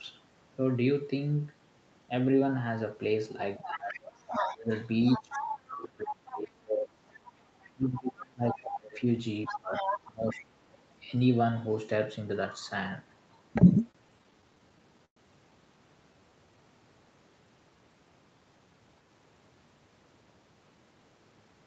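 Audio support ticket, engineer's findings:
Speech suppressed in double talk, 3.59–7.01 s and 7.71–10.43 s. Talker dips by up to about 25 dB, around three seconds and two seconds affected. Likely echo canceller: both ends active, could not separate near talk from echo, attenuated both.

Other side's voice leaking through, 3.62–6.38 s and 7.08–8.58 s at about 10 dB under the talker, 9.45–10.77 s at about 5 dB under. Second voice audible in the mic path. Likely residual loudspeaker echo the canceller failed to remove.

Repeated stalls (stutter), 13.91–15.18 s. Twelve short holds across the span, longest 113 ms, 234 ms concealed in total, 18% of the stretch. No audio missing, but playback drags and stutters. Jitter buffer repeatedly ran empty on late packets; receiver stretched the last sound each time.

Jitter buffer slow-down, 16.13–16.64 s. Playback at 87% speed, pitch unchanged, 75 ms added. 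Sound drawn out. Receiver repeated single pitch periods to rebuild buffer reserve after running low or raising its target delay.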